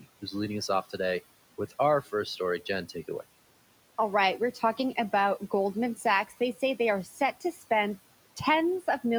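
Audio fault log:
4.54 to 4.79 s and 7.05 to 7.63 s: speech cut by the noise suppressor. The suppressor mistook parts of the speech for background and pulled them down by about 9 dB and about 10 dB, roughly a tenth and a third of a second, leaving them swallowed and faint.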